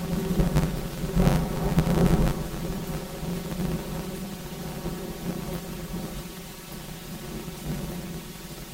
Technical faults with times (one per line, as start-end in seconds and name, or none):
0.00-8.74 planar audio read as interleaved